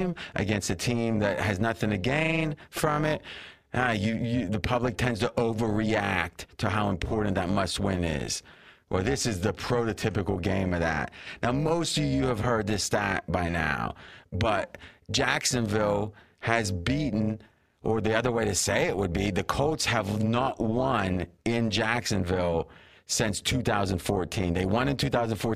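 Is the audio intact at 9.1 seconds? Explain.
No, at 9.1 seconds the speech carries overlap-add ripple running through the whole clip: mismatched frame overlaps pump the level by about 11 dB around 300 times a second, giving a metallic buzz with extra tones around each sound.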